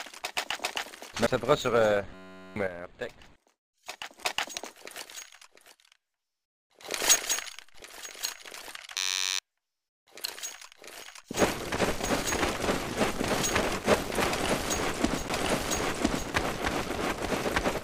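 CD skips are heard at 1.27, 11.02 and 15.29 s. Each gives a tick and a mute of a few milliseconds, then the sound resumes from a different point on the disc. A system hang loop runs from 2.14 to 2.56 s and again from 8.97 to 9.39 s. One 10.67 ms piece repeats 39 times, giving a steady buzz at 93.8 Hz, which fits a 512-sample buffer. Sudden gain jumps drop sound and background noise together by about 8 dB, from 2.67 to 4.19 s and from 7.15 to 7.75 s. The likely cause is a digital gain change applied without a ramp.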